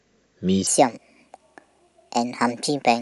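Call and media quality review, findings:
Wrong sample rate, 0.67 s to end of clip. Speech suddenly high-pitched and hurried: 1.45x speed, pitch up 6.45 semitones. Samples clocked out without resampling; ratio fits 22 kHz audio played at 32 kHz.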